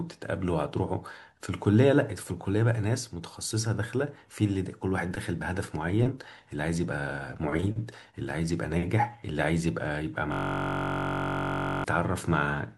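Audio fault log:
10.32–11.84 s system hang loop: a frozen driver left one 21.33 ms slice replaying, fitting a 1024-sample buffer; 46.9 Hz buzz, identical waveform cycles, evenly spaced spectrogram harmonics.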